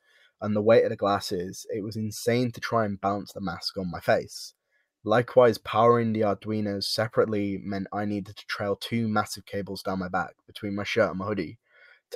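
From 0.01 to 0.41 s, the opening sound is cut by the noise suppressor: it misread the material as noise and applied gain reduction, pulling the level down by as much as about 17 dB over roughly 300 ms, so the start sounds sunken.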